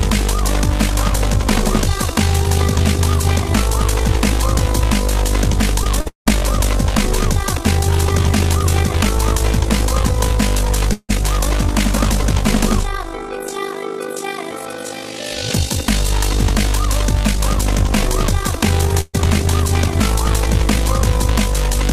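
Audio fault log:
Throughout, overlap-add ripple: the level swings by about 11 dB around 50 times a second, because the framed chunks were stitched back together with an overlap that doesn't add up to a steady gain. It fits a frame hop near 20 ms.
5.83–6.45 s, repeated packet loss (robotic sound): four holes in quick succession, about 252 ms patched in all and about 260 ms of audio gone, the longest gap 190 ms. Each hole is filled by carrying the last sound on, so the stretch comes out choppy with chunks missing; about 41% of it is concealment.
10.93–11.11 s, long network dropout: the sound is carried on for about 162 ms, tailing into around 30 ms of silence, then picks up with roughly 160 ms skipped. That's likely a stall in delivery, with the receiver stretching the last sound until it ran out.
19.01–19.16 s, burst of packet loss: about 127 ms of gap filled by extending and fading the previous sound, with no silence in between. 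Playback then jumps ahead, so around 120 ms of the original is simply missing.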